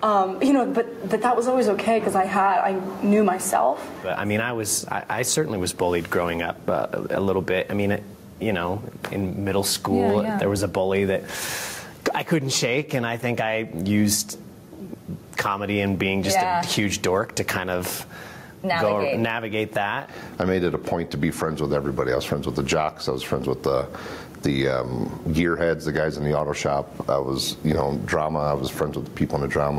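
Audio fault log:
Throughout, gain pumping: a swing of around 15 dB, leaving loud and soft passages squashed close together. The likely cause is input gain set far too high, with a fast limiter clamping down on each peak.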